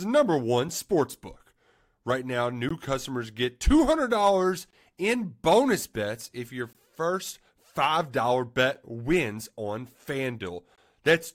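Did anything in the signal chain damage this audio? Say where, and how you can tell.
Yes, at the streaming stage: a gap between stream segments. Short silent holes open at 2.69 s just before "customers get", 4.71–4.73 s before "in bonus bets if", 6.73–6.75 s right after "bonus bets if your", and 10.76–10.78 s, each about 17–23 ms. They fall at multiples of roughly 2 s apart, which fits 2-second segments whose timestamps don't quite meet, so the player inserts silence. Nothing is lost. On a waveform each is a hard-edged flatline. On a spectrogram it is a thin, fully blank vertical stripe.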